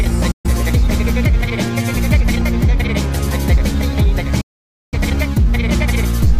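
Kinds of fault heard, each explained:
digital broadcast dropout: The receiver stopped getting usable frames and muted its output until clean ones arrived again. Here the sound fades out in about 8 ms and then goes silent, twice. The first hole runs from 0.31 to 0.50 s. The second, longer one runs from 4.41 to 4.98 s. Each time the sound comes back further along, so what was sent during the gap is simply missing.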